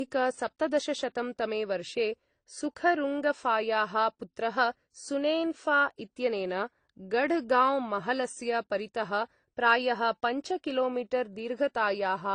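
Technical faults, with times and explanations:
Throughout, transcoding between lossy codecs: the speech carries two overlaid layers of coding damage, the artefacts of each codec heard together, and nothing is present above 19.7 kHz. The likely cause is a chain of lossy encoders, with the first pass sounding like low-rate AAC and the final pass like Opus at a moderate rate. The second encoder spends its bits reproducing the first one's artefacts and adds its own.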